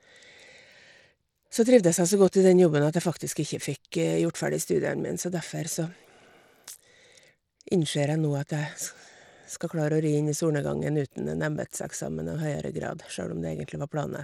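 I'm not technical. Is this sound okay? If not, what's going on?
No. Throughout the clip, the speech has a gritty, grainy edge, and the crisp top end of the sound comes and goes instead of staying steady. This points most likely to Bluetooth SBC compression, the basic codec many wireless headsets and speakers fall back on. It squeezes the audio hard, dropping or starving the highest frequencies first and roughly approximating the rest, which leaves this flickering treble and coarse, sandy texture.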